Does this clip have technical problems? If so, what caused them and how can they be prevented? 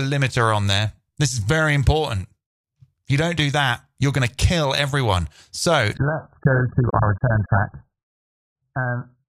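Yes. From 5.97 s to the end, the audio shifts abruptly to an adaptive stream at a lower bitrate. There is no gap, but the treble vanishes, with nothing above 1.8 kHz, and the sound turns dull and smeared with heavy codec artefacts. This points to the player dropping from roughly 96 kbit/s AAC to a rendition near 9 kbit/s when throughput fell. To prevent it, raise the minimum bitrate rendition or enlarge the client buffer.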